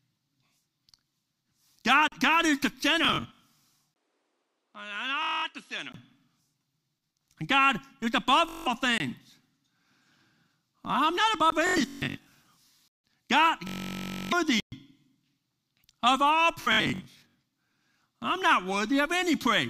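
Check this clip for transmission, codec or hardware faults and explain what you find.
Three kinds of fault turn up: repeated dropouts to digital silence, Bluetooth stutter throughout, and a stretch where the input seems to move to a poorer device.

Block of digital silence at 2.08 s (40 ms), 8.98 s (about 21 ms), 11.50 s (18 ms), 12.88 s (160 ms) and 14.60 s (120 ms): the output buffer likely went unfilled and was zeroed. The speech stops dead. The short ones are pops or brief holes, and the longer two are audible holes.

Bluetooth stutter from 3.05 to 3.44 s, 5.23 to 5.45 s, 8.49 to 8.68 s, 11.67 to 12.32 s, 13.67 to 14.33 s and 16.62 to 17.42 s: packets arrived late or not at all, so the receiver kept replaying its last short slice. This produces a buzzing, machine-gun repetition, with up to about 0.6 s missing in the worst run.

Input switched to a poorer device, from 3.94 to 5.94 s: the recording likely changed over to a lower-grade microphone path. 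There is a 20 ms gap at the switch, then nothing above 11.4 kHz, the level drops about 10 dB, and new background noise sits roughly 40 dB below the speech. The sound turns duller.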